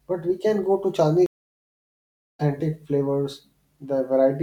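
A speech recording whose stream connection dropped and then re-established itself, forcing the player to start a fresh decoder partway through the stream. This stream reconnect leaves a gap of silence from 1.26 s to 2.40 s, lasting a little over a second. When the speech returns it has skipped ahead by roughly 0.7 s, as a live stream keeps moving while the player is offline, so a stretch of speech is lost.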